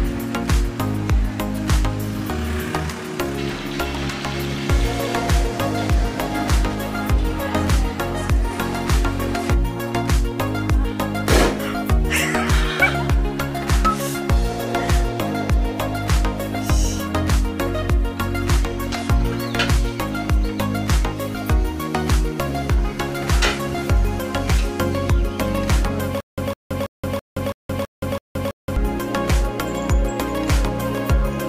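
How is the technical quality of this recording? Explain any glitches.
One glitch mars the recording: a stutter with silent gaps from 26.20 to 28.76 s. Playback likely stalled, so the same 156 ms burst repeats eight times, separated by 173 ms silences, and the intended audio is lost.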